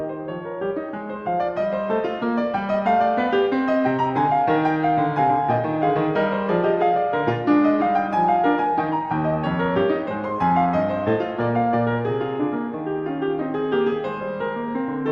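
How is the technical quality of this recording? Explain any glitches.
Nothing to flag in this music recording; it carries the character of a call path, with the high end topping out around 12 kHz, which points to Opus at a moderate bitrate.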